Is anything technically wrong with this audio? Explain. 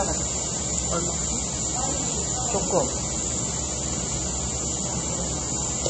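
Yes. Throughout the clip there is plainly audible MP3 compression damage. Nothing is present above 8.3 kHz, so the top end is cut off at a fixed point, and the remaining sound has a watery, swirling texture with metallic chirps on bright content and smeared attacks. That happens when an encoder starved of bits zeroes weak frequency lines, which then flicker on and off between frames. The damage fits a very low bitrate, around 32 kbps, and the likely cause is MP3 encoding.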